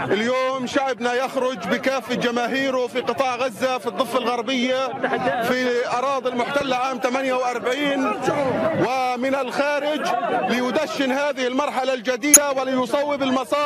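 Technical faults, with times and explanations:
12.33–12.37 s, damaged data in a compressed stream: a brief blip where corrupted bytes made the decoder misread frames and lose sync until it found the next frame header.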